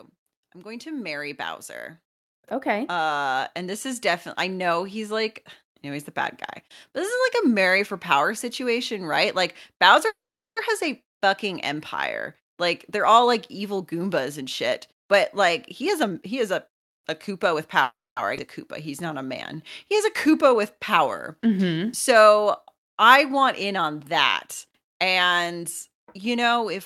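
It's a speech recording with a few classic call-path problems. From 0.53 to 6.13 s there's automatic gain rising: the level control decided the input was too quiet and pushed its gain up by about 12 dB over those several seconds, so the voice and background swell up together rather than jumping. Then come two call audio freezes, at 10.07 to 10.58 s and 17.83 to 18.19 s. The last sound smears on as a fading buzz and then drops to silence for roughly 410 ms and 230 ms respectively, and afterwards the speech picks up exactly where it left off, nothing lost, just a gap of about half a second and a third of a second pushed into the timeline. The likely cause is delayed packets draining the jitter buffer. Right after the second one, at 18.37 to 18.40 s, there's a skip ahead, where the playback jumps forward and drops something like a third of a second of audio, with the two sides butted almost straight together. 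The jitter buffer speed-up shows at 14.38 to 15.19 s (113%, about a tenth of a second trimmed), 15.82 to 17.54 s (116%, around a third of a second), and after "want in on that" at 24.66 to 26.74 s (106%, roughly 150 ms). Each time the receiver is snipping out tiny pitch-period slices to shed excess buffered delay, so the talking sounds hurried while the pitch stays put. Between those, from 18.68 to 21.87 s, the jitter buffer slow-down does the reverse. It repeats small pitch-period chunks to rebuild a reserve, adding 249 ms and running at 92% speed, so sounds get drawn out.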